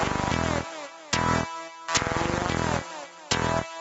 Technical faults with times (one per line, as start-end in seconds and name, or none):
0.00-3.80 gain pumping